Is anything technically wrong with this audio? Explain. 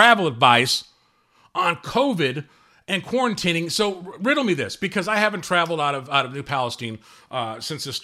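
No, nothing technically wrong can be heard in this speech recording. There is no technical problem to explain.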